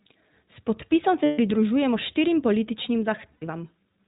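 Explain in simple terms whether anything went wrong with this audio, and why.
Two things went wrong. The whole recording passed through the iLBC codec, a phone-quality voice coder. It removes everything above 4 kHz, so the speech sounds muffled and slightly rough and robotic. Unlike ordinary background hiss, the roughness follows the speech itself.

There are also lost iLBC frames: chunks of audio went missing in transit. From 1.24 to 1.39 s, just before "pridružujemo štirim političnim", and from 3.32 to 3.44 s, right after "pridružujemo štirim političnim", the decoder filled the gaps with a held, buzzy, vowel-like sound instead of silence. Speech returns cleanly almost immediately, which sets it apart from codecs whose glitches linger.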